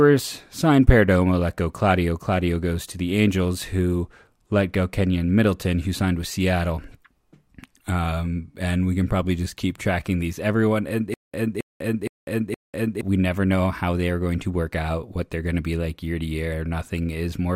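Stutter with silent gaps, 11.14 to 13.01 s: the same 0.27 s burst of speech returns four times, each followed by 0.2 s of digital silence, at a steady 0.47 s period. Playback likely stalled, replaying its last fragment at each retry, and the speech due in that stretch is lost.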